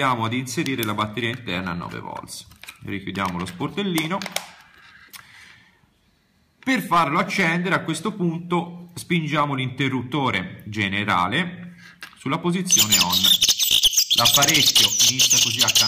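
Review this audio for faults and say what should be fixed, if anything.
Hard clipping runs throughout the clip: the signal was driven about 9 dB past what a stage could pass, so its peaks are cut flat on roughly 2 percent of samples. Those flattened tops add harmonics high in the spectrum on the clipped peaks. To prevent it, set gain so peaks stay below the converter's or format's limit, leaving several decibels of headroom.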